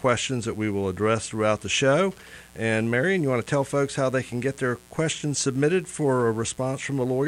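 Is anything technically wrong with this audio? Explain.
Yes. Mains buzz runs through the whole clip, sitting about 30 dB below the main sound. Sharp switching spikes, of the kind a dimmer, rectifier or poorly shielded cable lets in, enter twice per cycle of a 60 Hz supply. That builds a dense stack of 60 Hz harmonics reaching into the kilohertz range, heard as a steady, raspy buzz. A plain hum would be a smooth, low tone, and this one is edgy and bright.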